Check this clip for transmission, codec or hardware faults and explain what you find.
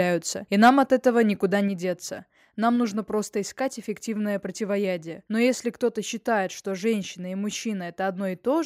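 Two hardware-side faults sit together near the start, just before "от этого никуда".

From 0.63 to 0.70 s the loudest peak turns harsh and crackly, its tops flattened for roughly a tenth of the samples. This is microphone overload, likely from input gain set about 3 dB beyond what the converter can represent.

At 0.69 s the voice and background drop together in one small step of about 2 dB. This is the microphone volume stepped down, likely the call software lowering the device's input level in response to that clipped peak.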